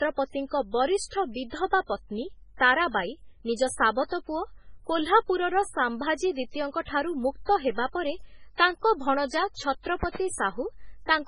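It's a speech recording, and the whole thing sounds like low-bitrate audio saved at a high bitrate. Nothing comes through above 10.5 kHz, and the smeared, swirly MP3 artefacts point to a very low-rate encode, something like 16 kbit/s, likely later re-saved around 256 kbit/s, which adds file size but can't bring back what was lost. There's also a loud pop from 4.00 to 4.03 s, roughly 10 dB above the speech, and then a double pop between 10.03 and 10.18 s, about 15 dB up. The speech keeps going underneath both, which fits a likely voltage spike from a plug, switch or static discharge.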